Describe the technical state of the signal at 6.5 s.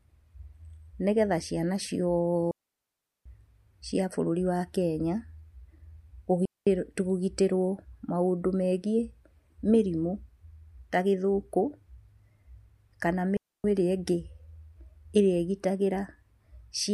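A digital wireless dropout occurs from 6.45 to 6.67 s: the radio link lost too much data, so the receiver muted the output for about 215 ms with a very quick fade. The speech drops into a clean hole of near silence, with no noise burst on either side.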